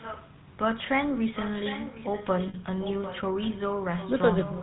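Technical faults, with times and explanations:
throughout: GSM full-rate codec. The speech has a steady buzzy, gravelly roughness, and nothing reaches above 4 kHz. The grain comes from modelling the vocal tract and exciting it with a sparse, regularly spaced pulse train, which fits the 13 kbps full-rate codec. Unlike generic low-bitrate smearing or plain band-limiting, the damage is a constant rasp tied to the voicing rather than a watery or dull quality.
2.48 to 2.55 s: lost GSM frames. For about 60 ms, which fits three 20 ms frames, the speech freezes into a rough, metallic ring. The decoder has no new data, so it repeats the last good frame's settings. That held tone is what separates it from a plain dropout, which would be an abrupt silence, or a click, which would be a single sharp tick.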